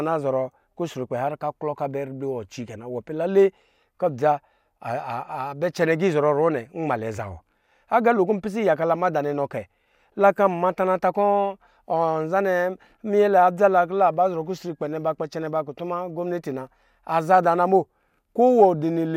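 No technical faults can be heard anywhere in the speech recording; the signal stays continuous and steady throughout.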